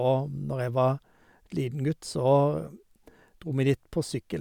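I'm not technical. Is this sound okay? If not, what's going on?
Yes, this recording sounds fine; nothing is wrong with it.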